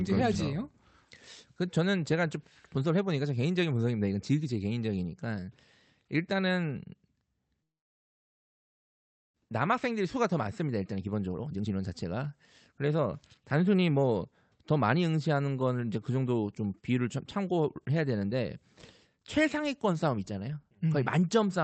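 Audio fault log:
7.63–9.38 s, long network dropout: the speech stops and is followed by a very short buzzy continuation of the last sound that fades almost at once, leaving near-silence for most of the 1.75 s stretch. When the speech returns, a part of about one second is simply gone. This points to a likely network outage: no packets reached the receiver, which first stretched the final sound and then fell quiet until audio arrived again, about 0.7 s later than before.
9.46–12.28 s, 12.84–13.06 s and 13.53–14.05 s, jitter buffer speed-up: right after the gap the speech sounds rushed while keeping the same pitch, running at about 122% for nearly three seconds, then in two brief bursts at 113% and 111%. The delayed audio had piled up in the jitter buffer, so the receiver cut short slices of one or a few pitch periods again and again to catch up, dropping roughly 0.7 s in the first run and a few hundredths of a second in each later burst.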